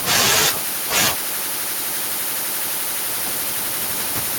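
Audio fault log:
No technical faults turn up anywhere in the clip. The room's own background noise climbs by about 22 dB at around three seconds in, yet it stays about 18 dB beneath the speech after that point.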